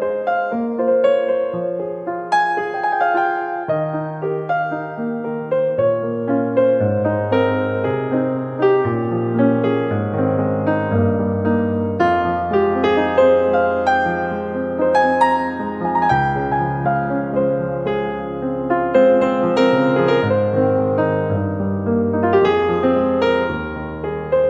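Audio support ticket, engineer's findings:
No audible faults found at any point in the clip; nothing to escalate.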